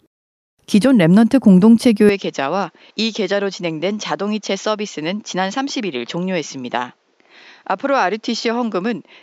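At 2.09 s the speech abruptly turns duller and about 10 dB quieter, with nothing above 7.6 kHz and a faint new background noise well below the voice, with no gap at the change. The likely cause is the input switched to a poorer device.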